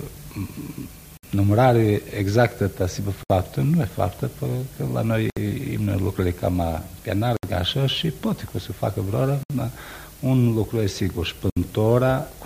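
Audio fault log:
1.17, 3.23, 5.30, 7.37, 9.43 and 11.50 s: gap at a join of encoded pieces. Silences of 60 to 67 ms break the sound about every 2 s, with smeared edges. Each separately encoded piece keeps its encoder's start-up delay and padded final frame.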